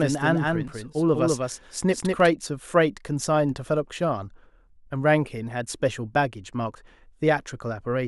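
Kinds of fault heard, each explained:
Doubled audio track: a second full-band copy of the speech trails about a fifth of a second behind, roughly 5 dB quieter, with no room colour. It's already running at the start and cuts off abruptly at 2.28 s, likely from a slower capture path.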